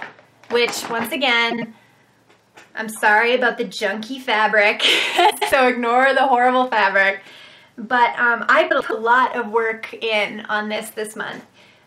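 At 1.51 s the sound briefly garbles until 1.64 s. This is frames out of order: two neighbouring blocks of about 52 ms each were decoded in swapped order, so the stretch plays with its halves exchanged. It flutters. The same fault returns from 5.30 to 5.52 s and from 8.70 to 8.93 s, with longer swapped blocks of about 105 ms. No time is lost at any of them.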